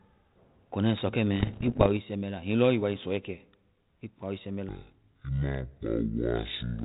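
From 1.40 to 1.87 s, bit errors on an ADPCM link cause pops and rough bursts with brief level jumps. Around one or two percent of bits are flipped, and each error knocks the decoder's step size and predictor off, so the damage rings on for milliseconds rather than clicking once.

From 4.69 s to the end, a section at the wrong speed plays at 0.545 times normal, about ten semitones lower. Tempo and pitch drop together, likely from a player on the wrong clock, which sets it apart from a pitch shift that keeps timing.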